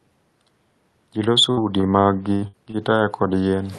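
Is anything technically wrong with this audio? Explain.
Yes. From 1.51 to 2.77 s the speech breaks up with repeated packet loss, giving a robotic sound. About six short holes appear, the longest near 60 ms. Each one is patched by stretching the preceding sound, so the stretch turns choppy, with fragments missing.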